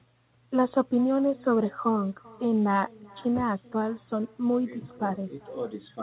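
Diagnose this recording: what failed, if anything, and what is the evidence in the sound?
Echo with no canceller, at the call-processing stage, runs through the whole speech clip: each phrase returns around 0.4 s later at about 26 dB down, and thinner. On a spectrogram every energy burst has a faint delayed twin below the 4 kHz ceiling of the narrowband call path, because the far end's loudspeaker feeds its microphone and nothing subtracts it.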